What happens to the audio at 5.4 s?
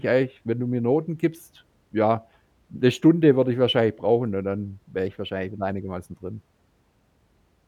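From 5.06 to 5.70 s, after "brauchen und dann wäre", the speech jumps 6% faster and about a semitone sharp, then snaps back. It's likely a drift correction step, with clock-sync software briefly bumping the playback rate.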